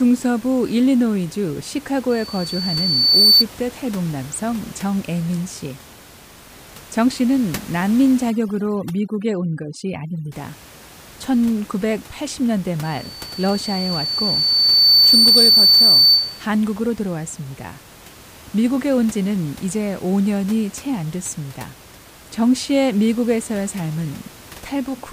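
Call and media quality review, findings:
Loudspeaker feedback squeal, 2.10–3.44 s and 12.84–16.46 s: a 4.5 kHz tone swells over about one and two seconds, ending around 10 dB above speech. The mic-speaker loop gain exceeds unity. Spectrogram shows a brightening horizontal line.

Overdone noise removal, 8.30–10.32 s: the background drops and breaks up into twinkling specks. The suppressor is gating bands near its noise estimate. Spectrogram shows black gaps with scattered isolated dots.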